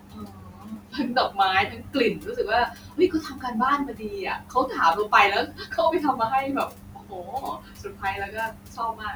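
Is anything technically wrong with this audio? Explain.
Yes. Speech cut by the noise suppressor runs through the clip: at 0.0–1.38 s, 1.66–1.96 s, 2.13–2.49 s, 2.67–3.57 s, 3.78–4.79 s, 4.95–5.13 s and 5.43 s to the end. The suppressor mistakes quieter parts of the speech for the room noise, which sits about 25 dB below the speech, and turns them down with it, by about 14 to 19 dB at worst. Altogether roughly six seconds of speech are affected, so consonants and word endings sound swallowed and faint.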